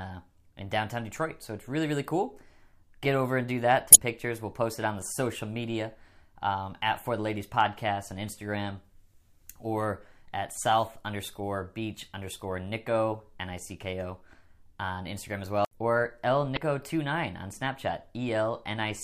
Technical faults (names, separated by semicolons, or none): damaged data in a compressed stream